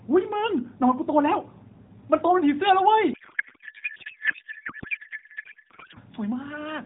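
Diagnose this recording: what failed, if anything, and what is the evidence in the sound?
A codec payload misread at the codec stage, from 3.14 to 5.99 s, breaks the speech. The sound turns into garbled noise and warble that barely tracks the talker. This points to octet-aligned AMR frames being unpacked as bandwidth-efficient, so every field is read from shifted bit positions. On a spectrogram, formant and harmonic structure gives way to smeared, unstructured energy below the 4 kHz ceiling of the narrowband AMR path, which sounds consistent with roughly 12.2 kbps.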